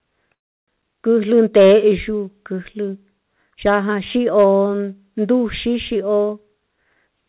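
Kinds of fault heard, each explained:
Call audio freeze: From 0.34 to 0.70 s the speech stops and is replaced by about 0.33 s of near-silence, then resumes where it left off. That's likely packets held up so the jitter buffer ran dry, so a gap is inserted but nothing goes missing.
Hard clipping: At 1.37 to 1.76 s the signal overdrives by about 5 dB, and the peaks get sliced flat into a harsh, crackly edge. A shorter, milder hit comes at 4.38 to 4.47 s, only about 2 dB over.
Jitter buffer speed-up: From 5.94 to 7.24 s the receiver trims tiny pitch-period chunks to shed built-up delay, so the speech runs at 110% speed with no pitch change. Roughly a seventh of a second vanishes, and it sounds a bit rushed.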